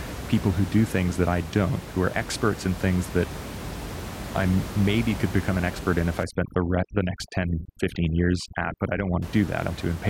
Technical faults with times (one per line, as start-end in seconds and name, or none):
6.23-9.22 overdone noise removal